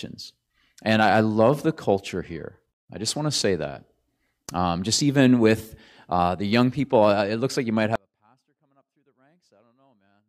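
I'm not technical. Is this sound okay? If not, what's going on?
No. At 7.96 s the speech suddenly drops away and never returns. Only a very faint sound stays, far quieter than before. This is an audio dropout to a faint residue, likely from the signal being cut while the recording kept running.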